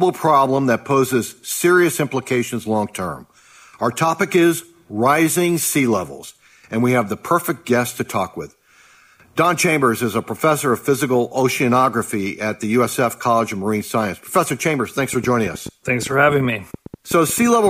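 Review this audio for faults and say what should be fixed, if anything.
A train of clicks runs from 15.13 s to 17.68 s: roughly twenty similar pulses at about 9 per second, spaced unevenly, each peaking around 5 dB above the surrounding audio, so they tick audibly over it. Similar repeated transients at an irregular pace point to something outside the signal injecting energy, likely interference from nearby equipment or a faulty connection or power supply. To prevent it, keep phones and switching supplies away from cables and use a stable interface with sufficient buffering.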